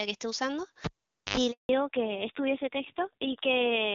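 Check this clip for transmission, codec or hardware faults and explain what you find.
Three faults can be heard in the speech, all within the first two seconds, and the last of them lasts to the end.

Cable pulled and plugged in, 0.85 to 1.37 s. A live lead is yanked out and pushed back. A pop marks the break, and the sound then drops to near silence for about 480 ms. As the plug goes back in, its tip makes contact before the ground does, so an 81 ms burst of 50 Hz mains buzz comes through before a second pop restores the signal.

Handover gap, 1.51 to 1.69 s. While the call was being passed from one network to another, no speech frames were delivered. The sound fades out within a few tens of milliseconds and stays silent for 180 ms until the new link begins carrying audio. Whatever was said in that window is simply missing, not muffled or delayed.

Fallback to narrowband, from 1.69 s to the end. 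Right after the handover, the call drops from the HD Voice wideband codec, which had been coding the speech cleanly, to the older narrowband AMR codec. The raspier texture points to a low rate such as 5.9 kbit/s. Nothing above 4 kHz survives, so the sibilance and airy top of the speech vanish. The remaining band sounds dull and rough compared with the first part of the clip.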